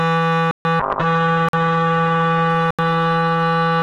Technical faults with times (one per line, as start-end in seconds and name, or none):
0.51-0.65 block of digital silence
0.80-3.82 call bitrate drop
1.49-1.53 block of digital silence
2.71-2.79 block of digital silence